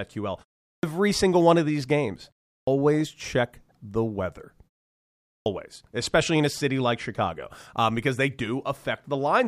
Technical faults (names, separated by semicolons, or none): clipped start after a pause